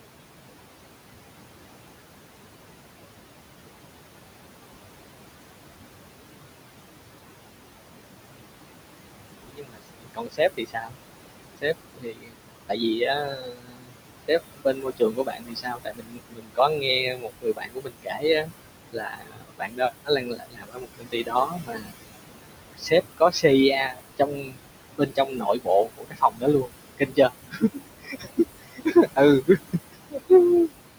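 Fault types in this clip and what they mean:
Noise suppressor artifacts: The noise suppressor estimates the steady background and pulls down every frequency band it judges to be noise, frame by frame, here by about 21 dB. The room noise, which sits only about 10 dB below the speech, drops away in the pauses and comes back up under the talking, so the background pumps with the speech.
Speech cut by the noise suppressor: The suppressor mistakes parts of the speech for background and turns them down along with the noise, at most by about 22 dB. Brief at 8.18 to 8.5 s, this becomes widespread from 9.43 to 21.93 s, where roughly 7 seconds are affected, and recurs from 22.75 to 30.7 s over about 3 seconds. Soft consonants, word endings and quieter phrases sound swallowed or fade to faintness.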